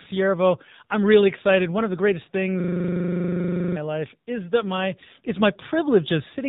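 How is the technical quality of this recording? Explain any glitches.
The speech sounds thin, boxy and buzzy from start to finish, with plainly audible AMR narrowband mobile codec damage. Nothing above 4 kHz survives, and the voice is rebuilt from a vocal-tract model fed by sparse pulses in 20 ms frames, which fits a low mode around 7.4 kbps.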